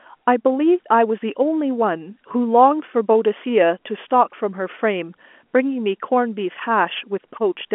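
Nothing's wrong with this speech clip: it's just ordinary telephone-line audio, with the band topping out around 3.8 kHz as G.711 coding does.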